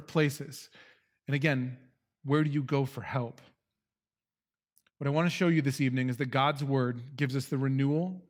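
No technical faults are audible.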